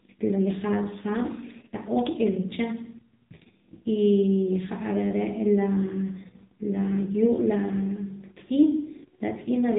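From start to finish, the speech carries AMR narrowband mobile codec damage, and it is heavy. Nothing above 4 kHz survives. A vocal-tract model rebuilds each 5 ms from a few pulses. The buzzy, synthetic tone points to a low mode, near 6.7 kbps.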